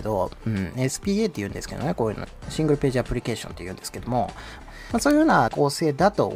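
Word clock ticks run from 0.21 s to 6.28 s, about thirty sharp clicks of uneven strength at roughly 0.2 s intervals. The receiving device is free-running rather than locked to the digital source, with clocks differing by around 100 ppm, so one sample is periodically dropped or repeated.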